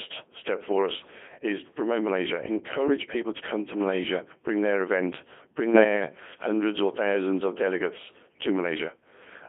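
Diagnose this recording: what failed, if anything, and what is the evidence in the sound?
The codec stage failed: the whole clip has the robotic, buzzy character of the Codec 2 vocoder. The decoder rebuilds speech from sine waves driven by pitch, voicing, energy and a spectral envelope, so the original waveform is gone and breathiness and fine texture become a synthetic hum. Codec damage is heavy, band-limited to roughly 250 Hz to 3.5 kHz, and fits a 2.4 kbit/s mode. Unlike ordinary low-bitrate transform coding, there is no swirly smearing, only uniform mechanical synthesis.

At the transmission stage, bit errors on digital voice radio strike from 5.73 to 5.84 s, just after "bring their event bring" and before "hundreds or thousands of". For about a tenth of a second the synthetic voice jumps in pitch, level and tone into a brief warbling bleep. The length points to about three corrupted frames, with a few percent of bits flipped. 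Each bad bit misdrives the synthesiser, so the result is gibberish rather than the silence or repeated audio of packet loss.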